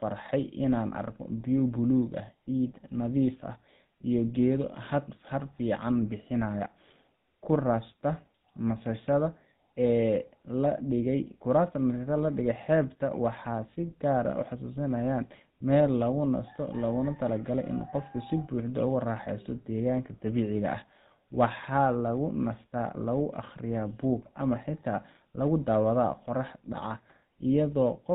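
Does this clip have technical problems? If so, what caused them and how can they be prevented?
Yes. Throughout, the speech carries GSM full-rate codec damage, a buzzy, gravelly roughness consistent with 13 kbps GSM. The spectrogram shows an empty band above 4 kHz and coarse, smeared harmonics from pulse-driven excitation. To prevent it, record or transmit through a wideband codec or uncompressed path instead of a GSM phone link.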